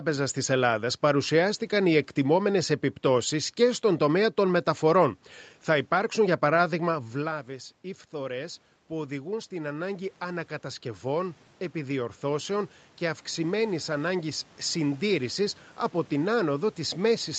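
Speech, and from 6.84 s, just after "υπάρξουν για", to 15.53 s, before "από την", automatic gain rising is audible. The level fell by about 14 dB as the talker moved back, and the gain control slowly pushed it up by about 11 dB. A talker returning closer would raise only the voice, but here the room noise swells right along with it over several seconds.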